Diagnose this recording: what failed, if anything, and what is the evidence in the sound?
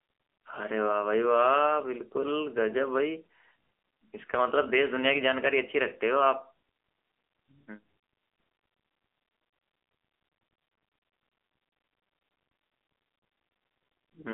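What failed here is the codec stage: this speech has gone through the AMR narrowband mobile codec for the whole clip. The band is squeezed to roughly 300 Hz to 3.5 kHz, with nothing at all above 3.5 kHz, and the damage is plainly audible as a buzzy, synthetic edge. That fits a low AMR-NB mode near 8 kbps, where the vocal-tract model gets only a handful of pulses per subframe to rebuild the excitation.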